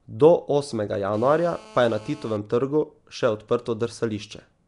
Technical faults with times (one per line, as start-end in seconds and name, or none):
0.00-4.67 Nellymoser compression
1.14-2.37 GSM phone buzz